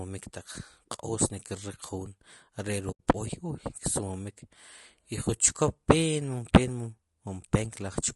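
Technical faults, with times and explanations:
Throughout: low-delay AAC compression; speech sounds rough and grainy, with noise between harmonics and a thin top band, likely from AAC-ELD short frames near 32 kbps.
2.91–3.0 s: AAC frame loss with muting; an 80 ms soft-edged hole where decoded audio fades out and back in, consistent with about four lost frames zeroed.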